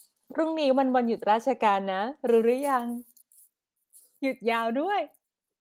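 Listening through this speech clip, nothing stood out as a technical problem.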